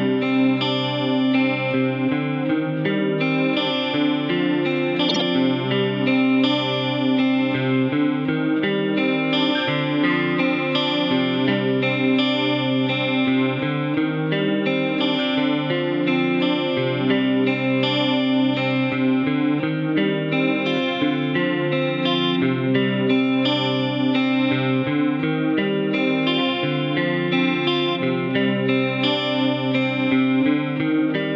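From 5.09 to 5.22 s, frames play out of order. Two neighbouring blocks of about 52 ms each were swapped, which fits two frames per block. The stretch sounds like a brief garbled flutter. No time is lost.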